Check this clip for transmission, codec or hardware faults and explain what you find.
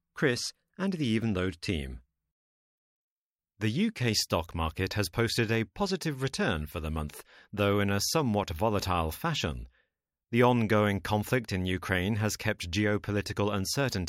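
No faults can be heard in this speech recording.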